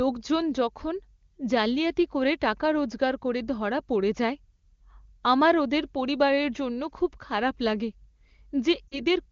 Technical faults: lost AMR speech frames

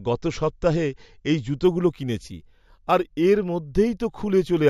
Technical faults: imaging from linear upsampling

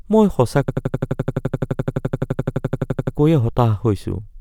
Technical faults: system hang loop

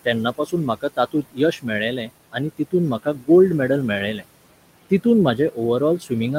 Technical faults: noise suppressor artifacts; speech cut by the noise suppressor

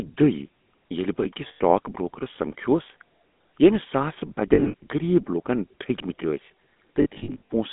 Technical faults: GSM full-rate codec; lost GSM frames

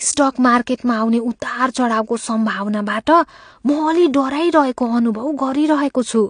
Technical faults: AAC compression

